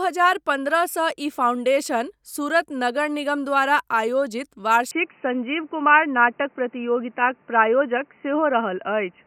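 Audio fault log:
4.91–9.26 s, input switched to a poorer device: with no gap at the change, the speech abruptly turns dull and boxy, losing everything above 3 kHz, its level shifts by around 5 dB, and a faint new background noise appears, roughly 40 dB below the speech. This is likely the system changing its input mid-recording to a narrower-band microphone or a headset call profile, whose own tone, gain and noise floor then carry the rest of the clip.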